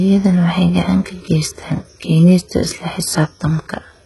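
This is speech carrying heavy HE-AAC compression from start to finish. The treble sounds synthetic, with s sounds coming out gritty and lispy, and nothing at all above 11.5 kHz. That's likely spectral band replication patching the top end in at a very low bitrate, around 12 kbps.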